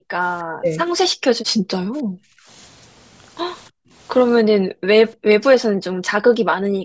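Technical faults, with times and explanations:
0.0–0.13 s, 1.13–1.86 s, 3.7–3.91 s, 4.54–4.87 s, 5.7–6.02 s: background gated by the echo canceller. While far-end audio played, the canceller pulled the microphone down by about 40 dB, so room sound vanishes briefly. The waveform's noise floor collapses to near-flat, and the spectrogram shows dark gaps across the band.
0.6–0.77 s, 2.14–2.21 s: speech suppressed in double talk. The talker dips sharply, by roughly 20 dB in the first and roughly 40 dB in the second, the likely cause being the canceller mistaking overlapping talk for echo. The waveform shows pinched envelopes, and the spectrogram shows harmonics abruptly fading.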